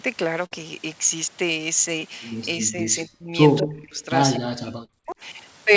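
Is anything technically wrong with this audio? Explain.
Yes. This speech has several call-path faults.

Burst of packet loss at 0.46 to 0.53 s: a run of audio arrived too late or not at all. The receiver stretched the last sound for about 52 ms, fading it, then resumed with roughly 60 ms of speech skipped, leaving a brief held buzz or hiss and a jump.

Short concealed packet loss at 1.99 to 2.03 s and 4.85 to 4.92 s: small gaps of about 20 ms and 40 ms were patched by extrapolating the preceding sound and crossfading back. Each is heard as a quick smear or wobble, and the later one adds a few milliseconds.

Speech suppressed in double talk at 2.58 to 3.35 s, 3.60 to 4.09 s and 4.38 to 5.17 s: the level dips deeply, by around 30 to 40 dB at worst, in stretches totalling about half a second or more each. The likely cause is an echo canceller clamping down while both ends spoke.

Echo leak at 3.57 to 3.62 s and 3.96 to 4.04 s: faint delayed copies of the speech appear, trailing by 225 ms, the first about 15 dB below the speech and the second far quieter. 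This is likely residual loudspeaker pickup that the far end's echo canceller failed to remove.

The G.722 call path and microphone processing limit the audio to 8 kHz, as expected.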